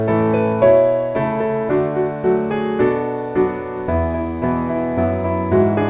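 No faults are present; the band stops at 4 kHz, as expected of a narrowband call path and consistent with G.711 A-law at 64 kbps.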